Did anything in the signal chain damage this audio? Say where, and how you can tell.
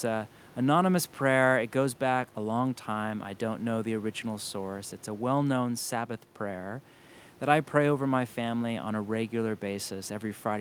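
No, nothing in the signal chain audibly damaged this speech.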